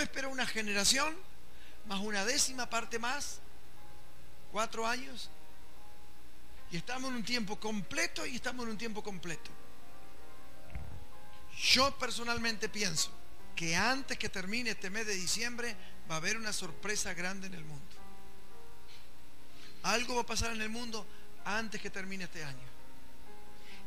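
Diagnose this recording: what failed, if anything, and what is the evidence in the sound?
Nothing in the recording points to a failure at any stage of the chain. No event in the sound calls for a diagnosis.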